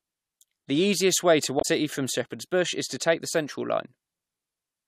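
Damaged data in a compressed stream at 1.58–1.65 s, just after "easiest way to": corrupted frames make the decoder lose sync, producing a brief glitch.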